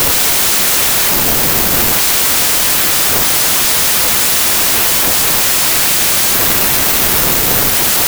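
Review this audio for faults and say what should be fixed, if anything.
Wrong sample width runs through the whole clip. The speech sits under loud, harsh noise. It plays at about 0.67 times normal speed, so it is slow and pitched down. This fits packed 24-bit samples being read as 16-bit ones. Many 16-bit values are then built from mismatched bytes. Only some carry the real top bits. To prevent it, declare and check the sample format at every read and write.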